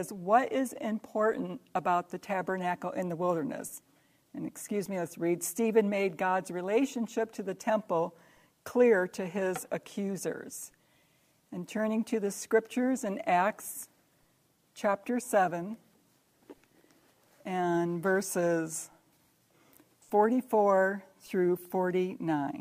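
No technical faults can be heard in this audio.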